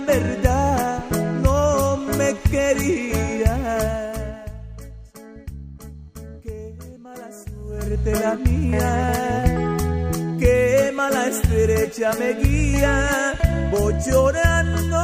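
From 7.63 to 7.98 s there is zipper noise. The level changes by roughly 15 dB over that third of a second. It moves in discrete steps rather than a smooth ramp. The steps come at about 150 per second. Each jump leaves a tiny click in the waveform. Together they form a fast, gritty ticking that rides on the sound while the level moves.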